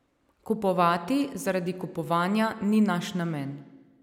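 No technical fault can be heard anywhere in the speech. Nothing in the sound points to trouble in how it was captured, carried or played back.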